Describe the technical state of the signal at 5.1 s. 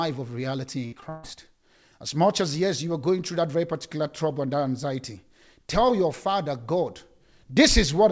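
At 5.1 s the speech is intact, with no dropout, glitch or distortion, only the top end ending around 8 kHz as expected from a wideband call codec such as G.722.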